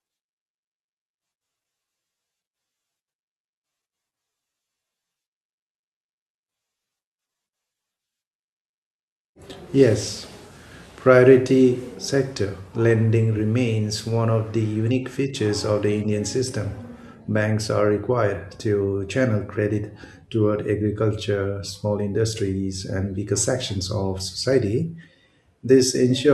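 Speech, with a brief burst of DAB burbling at 24.53 s, straight after "and weaker sections of": a few watery blips over the voice. Weak reception let a very low rate of bit errors past the error correction into the MP2 data, so corrupted samples put short blips of noise in single sub-bands. It sounds like a handful of damaged frames. On a spectrogram this shows as isolated bright rectangular patches in narrow bands; the waveform barely changes.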